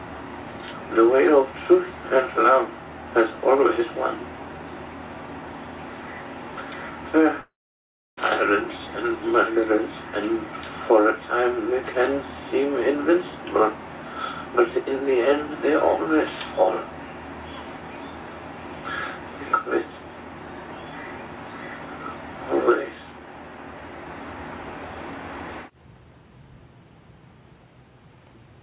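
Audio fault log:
7.4 to 8.19 s, long network dropout: about 0.78 s of sound is missing. The last moment before the gap is stretched into a buzzy or hissy tail that fades into a low, steady near-silence, and the audio then resumes further along with the lost part gone. The cause is likely a run of packets that never arrived. Unlike a brief packet-loss click or a clean mute, it leaves a fading synthetic tail and a jump in the content, heard within the 4 kHz G.711 call band.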